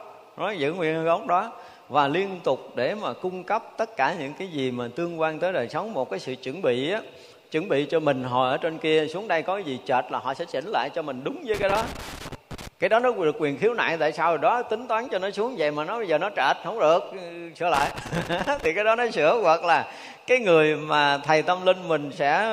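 A worn or dirty contact making and breaking produces loose connector crackle, chopping the signal into irregular scratchy bursts from 11.54 to 12.68 s and 17.74 to 18.66 s.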